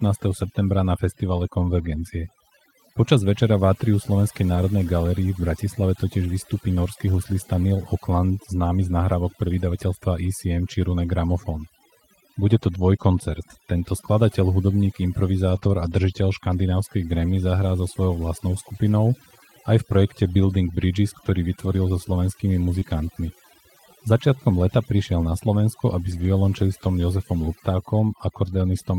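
Throughout the clip the pauses drop and break up into twinkling specks. This is overdone noise removal: a noise reducer set too hard pushes individual frequency bands down whenever they sit near its noise estimate, taking quiet parts of the voice with them.

From 4.55 to 4.57 s, just before "galerii v", the voice turns briefly grainy and rougher without any gap. This is a lost packet rebuilt from error correction: about 20 ms of audio went missing, and the decoder played the low-bitrate backup copy carried in the next packet. The same roughening recurs at 15.55 to 15.57 s.

Between 15.59 and 15.63 s, right before "a držiteľ škandinávskej", there is a short smear. This is short concealed packet loss: roughly 20 ms never arrived, and the receiver extended the preceding sound to bridge it before blending back in. The following stretch, 15.63 to 15.69 s, is grainy again, with about 40 ms rebuilt from error correction, which fits two lost packets.

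At 22.79 to 22.83 s another concealed gap of about 20 ms blurs the sound, and its final part, 22.81 to 22.83 s, carries the rougher texture of a frame rebuilt from error correction. The longest rebuilt stretch runs from 26.11 to 26.25 s. Its roughly 80 ms of coarse, noisier audio fits four lost packets recovered from the backup copies.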